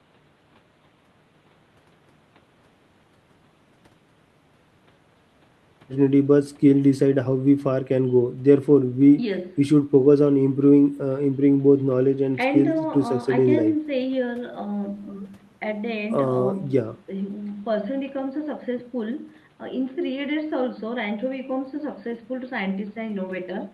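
No faults in this speech recording; the room noise sits about 30 dB below the speech, and the call path's codec tops out around 12 kHz as expected.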